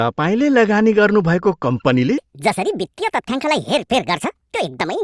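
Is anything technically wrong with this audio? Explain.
Yes. From 2.18 s to the end, the speech has a wrong sample rate. It runs 1.5 times too fast and about 7 semitones high, which fits 16 kHz material played back at 24 kHz. On a spectrogram, harmonics and formants jump upward and syllables compress in time.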